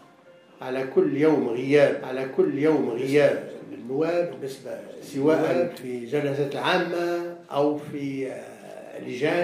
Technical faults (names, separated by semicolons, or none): doubled audio track